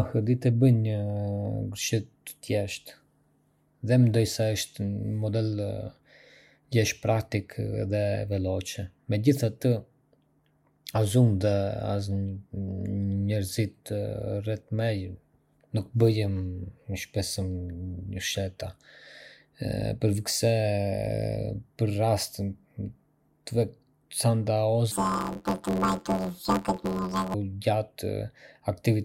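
From 24.92 to 27.34 s the speech turns into a robotic buzz. This is planar audio read as interleaved. Each block of left samples followed by right samples gets unpacked as alternating pairs, so each block's left half and then its right half play at double speed. The blocks are only about 11.6 ms long, which fits a 512-sample buffer, so there is no clear octave jump, just a buzz near 86 Hz. A spectrogram shows vertical striations about every 11.6 ms and harmonic bands spaced about 86 Hz apart. In the waveform, each short stretch appears as a squeezed segment followed by a similar copy.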